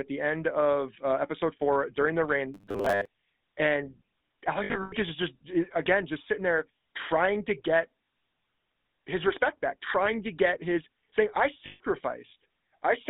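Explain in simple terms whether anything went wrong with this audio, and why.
A few things went wrong here, and they're easy to hear once you know what to listen for.

The whole recording went through the GSM full-rate codec, the original mobile phone speech coder. It rebuilds the sound from a rough model of the vocal tract, driven by a sparse train of pulses, so everything picks up a buzzy, gravelly grit. The line only carries roughly 200 Hz to 3.7 kHz, which makes the sound thin and muffled, and that coding damage is plainly audible all the way through.

From 2.54 to 3.07 s, just after "episode four during the", the sound turns into robotic sound from repeated short buffers: a stiff, metallic drone at a fixed 100 Hz pitch that still loosely follows the talking. That pitch fits a chunk of about 10 ms being played over and over. The likely cause is new audio arriving too slowly, so the player keeps repeating the last bit instead, and most of that half-second is repeats rather than fresh sound.

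There are also lost GSM frames in three places. Around 4.64 to 4.94 s, gaps are scattered through the stretch, adding up to 180 ms, with the longest run around a tenth of a second. Right after "there trying to get", at 8.04 s, there's a brief 40 ms glitch. Just after "get his saying I", from 11.66 to 11.81 s, about 140 ms goes missing. Each time, the phone covers the hole by repeating the last good sound, which you hear as a short, rough metallic ring.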